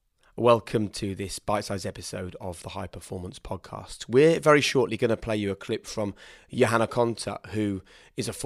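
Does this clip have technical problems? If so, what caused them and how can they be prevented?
No, nothing in this speech recording stood out as a technical problem on listening, so there is nothing here to trace to a cause or prevent.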